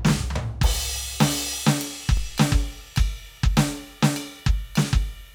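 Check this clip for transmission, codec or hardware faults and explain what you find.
One hardware fault is present in this music recording. DC step at 2.17 s: the waveform's zero line suddenly jumps by about -24 dBFS, as happens when a converter recalibrates or an input carrying an offset is switched in. A 2 Hz high-pass then drains the offset away, so it decays back toward zero within a fraction of a second. The jump is heard as a single low thump, with the music carrying on unchanged through it.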